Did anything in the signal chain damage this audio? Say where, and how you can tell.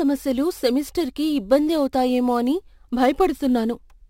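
Yes: imaging from sample-and-hold upsampling at rate conversion. Unfiltered repeated samples mirror the speech into 11 to 22 kHz, a metallic fizz about 26 dB down throughout, which fits a 22 kHz stream raised to 48 kHz.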